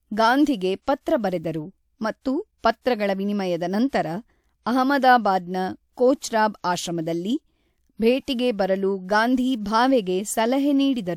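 Speech with repeated pre-echo: a short hiss smears in just ahead of sharp onsets at 0.82, 1.01 (just before "ಬರೆದರು ಮತ್ತು"), 2.58, 2.81, 3.88 and 6.17 s, each lasting about 41 to 56 ms. A transform codec has spread quantisation noise across the block holding each attack. On a spectrogram this appears as a broadband smudge before each onset; on the waveform the attack shows low-level noise rather than a clean rise.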